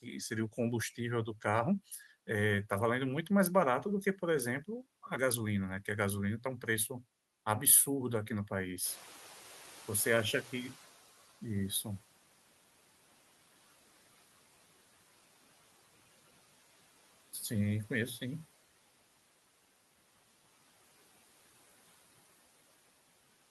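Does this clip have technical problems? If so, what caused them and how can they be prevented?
Yes. From 8.84 to 11.13 s the noise suppressor is catching up. Room noise jumps by about 15 dB near 9 s, and the noise estimate takes 2.29 s to follow, so the noise passes at first, then sinks by about 10 dB. A spectrogram shows broadband haze appearing abruptly, then fading. A suppressor with faster noise tracking would prevent this.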